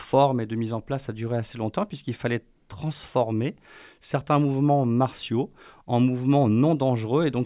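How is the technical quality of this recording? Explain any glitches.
No glitches or technical faults are audible anywhere here.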